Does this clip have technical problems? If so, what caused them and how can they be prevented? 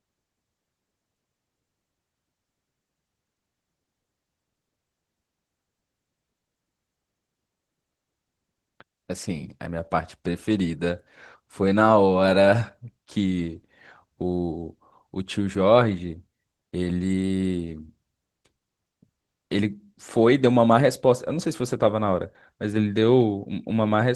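Yes. Opus voice compression damages the speech plainly from start to finish. The sound points to hybrid mode at a low rate, around 16 kbps. The lower band is coded by linear prediction, with a coarsely quantised excitation. The content above 8 kHz gets a thin transform layer. Too few bits are spread across a full band, and the coding damage is easy to hear. To prevent it, encode at a higher bitrate.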